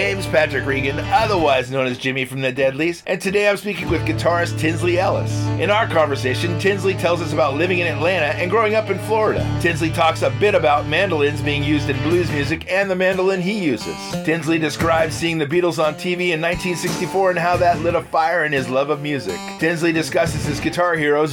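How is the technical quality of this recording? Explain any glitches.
No glitches found; nothing in the recording calls for repair.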